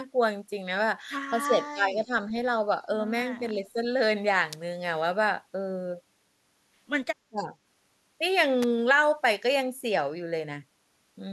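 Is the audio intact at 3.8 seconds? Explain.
No, speech suppressed in double talk runs 3.4 to 3.82 s: likely an echo canceller mistaking overlapping talk for echo, dipping the voice by roughly 10 dB.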